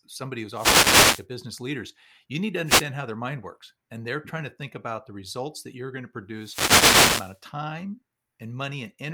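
Wireless microphone noise hits at 0.53–1.26 s after "somebody who's", 2.65–2.85 s after "leaders you need to", and 6.36–7.40 s after "that you're going to" in this speech clip: the FM radio link fades as reflections cancel, letting receiver static swish up over the voice.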